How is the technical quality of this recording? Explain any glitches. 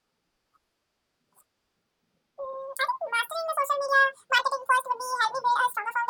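The recording has one serious fault, and it runs for the whole clip. A wrong sample rate makes the speech play twice as fast as it should. It also sits a full octave too high, 12 semitones up. The samples are being read out at double the rate they were captured at, with no conversion in between. That fits audio recorded near 22 kHz being played back at 44.1 kHz. Speed and pitch rise together by the same factor, so the speech sounds hurried, thin and chipmunk-like.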